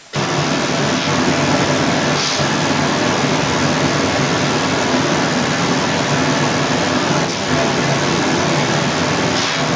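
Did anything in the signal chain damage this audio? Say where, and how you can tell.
Yes, at the call-processing stage. From 0.0 to 0.13 s the speech dips by about 10 dB, in fragments totalling roughly 70 ms, while a second voice is also present. This is speech suppressed in double talk, likely an echo canceller ducking the talker. Unlike a network dropout, the gaps follow the overlap rather than landing at random.

A second voice runs under the talker for the whole clip, at a level of roughly 10 dB relative to the speech. This is the other side's voice leaking through, likely loudspeaker echo the canceller failed to remove. Crosstalk on the analogue wiring would sound clean and full-band. Like the talker, it has nothing above 8 kHz from the call's microphone processing.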